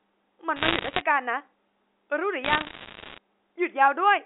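Bit errors on a digital phone line crackle through this telephone-band speech from 0.56 to 1.02 s and again from 2.44 to 3.18 s: flipped bits, around one or two in a hundred, corrupt single samples of the G.711 stream, and hits on sign or high bits produce the sharp ticks.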